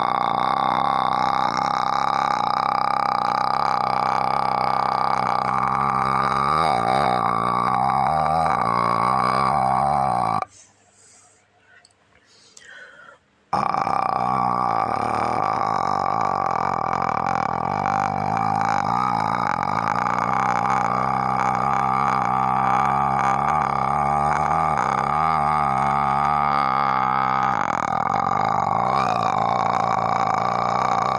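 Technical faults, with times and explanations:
No technical faults can be heard anywhere in the audio, with no interruptions or defects at any point.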